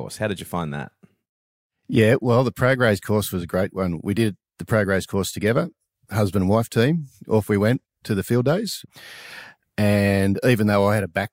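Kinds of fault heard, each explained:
No technical faults are audible.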